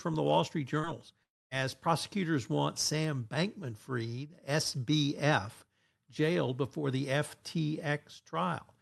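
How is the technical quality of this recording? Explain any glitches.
Two network glitches affect this call recording. Both occur in the first two seconds, and the highs stop near 12 kHz, which fits a call codec.

From 0.79 to 0.86 s there is short concealed packet loss. About 40 ms never arrived. The decoder stretched the preceding sound to cover it, leaving a brief smear.

From 1.23 to 1.54 s there is what is likely a long network dropout. The last sound carries on briefly as a fading buzz, then about 0.25 s of silence follows. The audio resumes with roughly 0.28 s missing.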